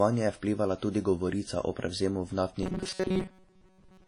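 From the start, the speech carries WMA compression damage that is plainly audible. Coarse quantisation in long transform blocks smears noise over tens of milliseconds around each syllable, giving a ringing, washy texture and a hiss that rises and falls with the speech. The strength of the damage fits a low bitrate of around 32 kbps, likely from a basic WMA encoder.

At 2.63 s the sound turns into a rigid metallic buzz that lasts to the end of the clip. This is robotic sound from repeated short buffers. New audio is arriving too slowly, and a fragment of roughly 5.3 ms is looped to fill the gaps, so around 70 percent of what is heard is repeated material while the real signal is skipped. The looping imposes a buzz at 188 Hz, so the speech keeps only its rough contour. The likely cause is a playback or transport stage running short of data.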